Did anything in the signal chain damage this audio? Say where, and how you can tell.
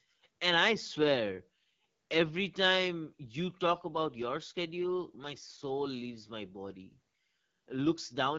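Yes. At the codec stage, the AMR wideband (HD Voice) codec roughens and rasps the speech throughout, which fits its low 8.85 kbit/s mode. Its wider band, reaching up to 7 kHz, rather than the rasp, separates it from narrowband telephony.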